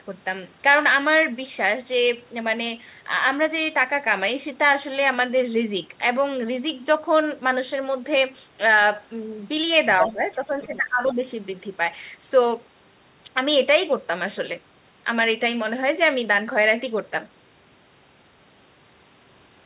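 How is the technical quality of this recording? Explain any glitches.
Two kinds of glitch cluster around the 10-second mark: a second voice bleeding in, and the main speech being pushed down while it does. The audio is narrowband throughout, with nothing above 4 kHz, which fits a G.711 A-law call path.

From 9.99 to 10.11 s, and again from 10.62 to 10.76 s, short scraps of another voice appear. This is likely the other side's voice leaking through: the far end played on a loudspeaker and reached the microphone, and the echo canceller left some of it in. The first scrap is roughly as loud as the speech itself. The second sits well underneath, about 20 dB down. Both are brief fragments, which sets them apart from crosstalk on the line.

From 10.08 to 11.21 s the speech itself sags, dropping by as much as about 15 dB, and about a second of it in total sounds dulled or broken up. This points to speech suppressed in double talk. 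With both sides talking at once, the canceller apparently could not tell the talker from the echo and attenuated everything. It differs from a dropout because the speech thins and dips rather than vanishing cleanly, and it coincides with the leaked voice.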